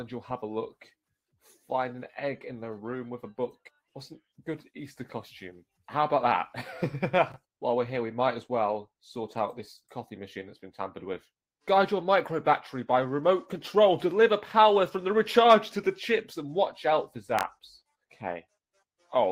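Chunks out of order at 7.32 to 7.36 s and again at 17.39 to 17.43 s: each time a short jumbled blip, as one block of about 21.33 ms plays one slot late, after the block that should follow it. No audio is missing, but the swap leaves three hard joins in each spot.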